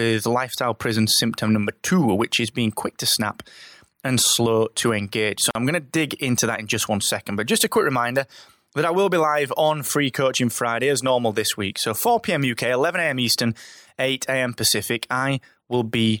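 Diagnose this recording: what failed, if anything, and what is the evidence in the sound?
A gap at a join of encoded pieces, a codec-stage fault, opens in the speech from 5.51 to 5.55 s, a silence of 43.5 ms just before "I'm going to dig", after which the speech resumes where it stopped. The audio was encoded in separate pieces and joined untrimmed, so the encoder's start-up delay and final-frame padding remain as dead air. On a waveform it appears as a flat-line notch with softened edges; a spectrogram shows a narrow blank column, its borders slightly smeared by the codec.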